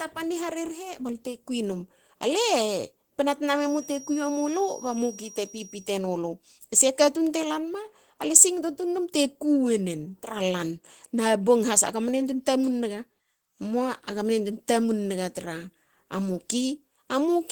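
Opus voice compression runs through the whole speech clip, and the damage is plainly audible. The band stays full, with content reaching about 20.2 kHz, so the dullness is not a low-pass cut. The speech sounds hoarse and faintly robotic because the low band is modelled by linear prediction and its excitation is coded coarsely. The upper band is filled in more loosely by a second layer. That hybrid behaviour, in 20 ms frames, fits a rate near 16 kbps.

From 3.50 s to 5.93 s a feedback whistle sits behind the speech. It is a single thin tone at 5.7 kHz, roughly 20 dB below the speech, and it swells and fades slowly in level. The likely cause is a loudspeaker-to-microphone loop held just at the edge of feedback. Unlike a runaway howl, it never builds. Unlike an electrical tone, it is high-pitched and unsteady rather than fixed in level.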